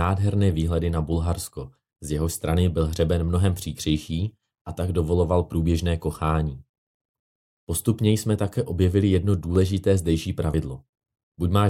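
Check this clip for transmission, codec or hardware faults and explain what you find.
Two short discontinuities in the speech, at 9.56 s right after "jsme také objevili jedno" and again at 10.54 s: each is a point where the sound jumps ahead, dropping roughly 10 ms and 20 ms. That's likely a dropped buffer (overrun), where unread samples got overwritten and the ends were spliced together.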